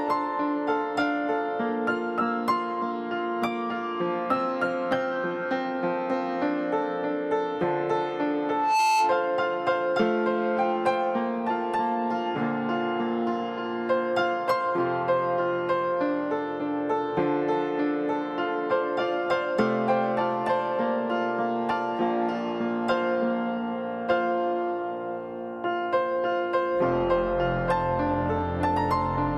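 Loudspeaker feedback squeal from 8.44 to 9.37 s: a single 875 Hz tone swells over a few tenths of a second until it sits about 5 dB above the sound. A microphone is hearing its own loudspeaker, and at that frequency the loop gain passes one, so the tone keeps feeding itself.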